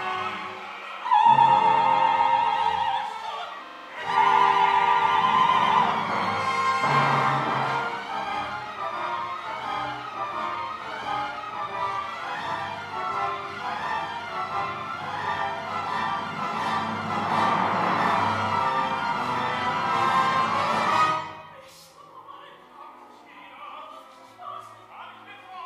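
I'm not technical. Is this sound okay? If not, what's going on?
No. From 3.67 to 3.88 s, one tiny 43 ms slice of sound repeats five times in a row, giving a rapid stutter about 23 times per second. This is a system hang loop: the computer briefly froze while the sound hardware kept replaying the same chunk it already held.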